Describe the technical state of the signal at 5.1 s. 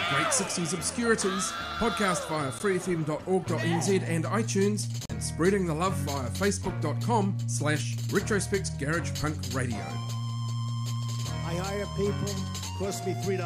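Right around there the signal drops into a block of digital silence, from 5.06 to 5.10 s, about 40 ms of silence. The output buffer most likely didn't get filled in time, so those samples went out as nothing at all. The sound cuts off and comes back with no fade, and at 40 ms you hear it as a short hole in the sound.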